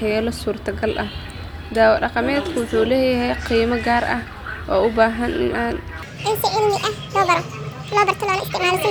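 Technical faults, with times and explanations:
6.02 to 8.91 s, section at the wrong speed: From 6.02 s to the end, the speech suddenly runs 1.7 times too fast. Pitch and tempo rise together, so the voice jumps up by roughly ten semitones and sounds squeaky and rushed. The change is abrupt, with no gradual shift. This part was likely played back against the wrong clock, so its samples were read out faster than they were recorded.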